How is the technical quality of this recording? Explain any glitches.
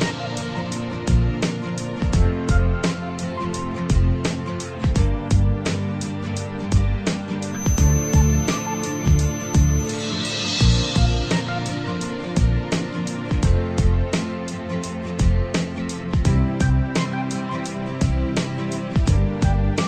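One fault stands out: a feedback whistle from 7.47 to 9.99 s. A thin, steady tone at 6.1 kHz sits behind the sound, roughly 15 dB below it, swelling and fading slowly in level. The likely cause is a loudspeaker-to-microphone loop hovering at the edge of feedback, reinforcing one frequency without running away. On a spectrogram it appears as a narrow horizontal line at 6.1 kHz lasting about 2.5 s; the waveform barely shows it.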